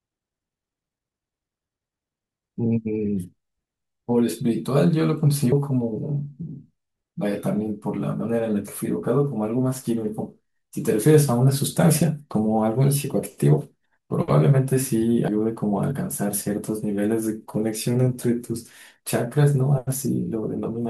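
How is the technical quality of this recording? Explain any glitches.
The recording has two glitches of one kind, compressed frames skipped, at 5.52 s and 15.28 s. Whole frames, apparently 32 ms each, went missing, so the speech jumps ahead by about 70 ms and then about 100 ms. Each join is heard as a brief discontinuity. A waveform or spectrogram shows an abrupt content change there.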